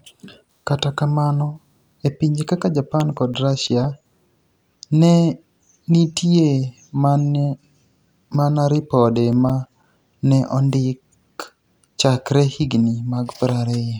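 Just after "kamano e pinije kaka", from 3.00 to 4.34 s, and again from 9.16 to 10.16 s, the speech carries a run of regular ticks, about seven a second, each only a few milliseconds long. These are CD scratch ticks: each disc rotation carries the player past a blemish that leaves too much data for error correction to rebuild, so it patches or mutes those samples.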